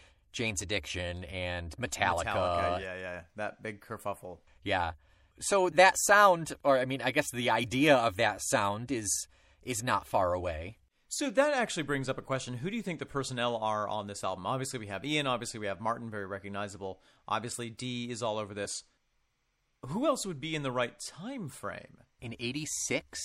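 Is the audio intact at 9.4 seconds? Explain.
No. At 9.4 seconds the speech carries MP3 compression artefacts, as it does through the whole clip. The damage is plainly audible. Quiet spectral detail drops in and out from frame to frame, which gives a watery, swirling texture. S sounds turn chirpy and metallic, and onsets smear. The likely cause is a low-bitrate encode, which fits roughly 64 kbps.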